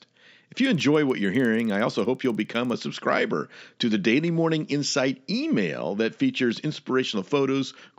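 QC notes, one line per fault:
0.6–2.75 s, resampler restarted on every block: a steady tick at 20 Hz runs under the speech until just before "subscriber to the". The rate conversion, which fits a step from 16 kHz up to 48 kHz, was done on each 50 ms block in isolation. At every block edge the converter's filter lacked the real neighbouring samples, leaving a small error at each boundary. This is heard as regular ticks, present only while there is signal.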